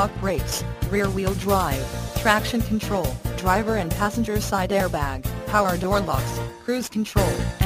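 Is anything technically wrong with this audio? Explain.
No, nothing technically wrong can be heard in this audio. No fault shows up anywhere in the recording.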